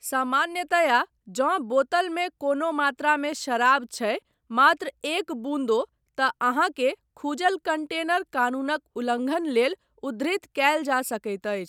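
No technical faults are audible.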